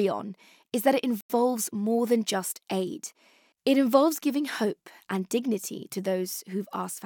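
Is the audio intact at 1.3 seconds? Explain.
No. A Bluetooth stall drops the speech to silence for about 90 ms, from 1.21 to 1.30 s, ending right at that moment. The likely cause is a wireless buffer running dry while delayed packets were resent. The waveform flatlines, and the spectrogram shows a blank vertical band across all frequencies.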